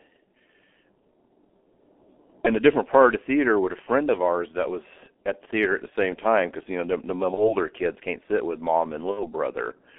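A speech recording carried through a G.723.1 codec for its full length, with the audio confined to roughly 250 Hz to 3.5 kHz. The heavy coding damage, consistent with a stream near 6.3 kbit/s, leaves it muffled and hoarse with smeared consonants, because the codec's slowly updated voice model cannot track fast articulation. VoIP packet loss concealed by the speech codec appears twice. From 7.34 to 7.57 s, just before "kids can't sit with", the gap fits a single lost 30 ms frame. From 9.11 to 9.24 s, right after "can't sit with mom", it fits about 60 ms of missing packets. In both places the decoder rebuilt the missing audio from its last pitch and filter state, producing a buzzy tone or coloured noise that fades. The disturbance outlasts the actual loss because each frame depends on the one before, so the signal stays weak or distorted until the decoder resynchronises.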